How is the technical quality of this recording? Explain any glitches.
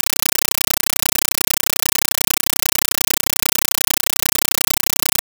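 The recording is unusable as it stands, because the speech never comes through. For the full length, the output is a compressed stream played as audio: an AC-3 bitstream, consistent with 384 kbps, was passed to the output as if it were PCM samples rather than being decoded. Each coded frame lands as an 8 ms burst of noise followed by silent padding, repeating 31.25 times a second. The result is loud, harsh, chattering static in place of the speech.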